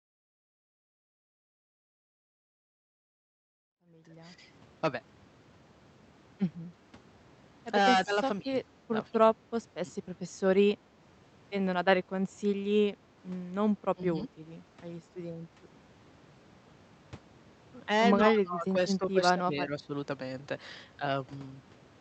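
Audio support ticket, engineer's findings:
Speech suppressed in double talk: level dips of about 10 to 20 dB at 3.73–4.4, 8.05–8.73, 9.11–9.36, 9.85–10.06, 13.94–14.3 and 18.28–19.91 s, the last being longest and, with 13.94–14.3, deepest. The likely cause is the echo canceller ducking near-end speech during far-end talk. These are graded gain dips, not hard packet-loss gaps with clicks.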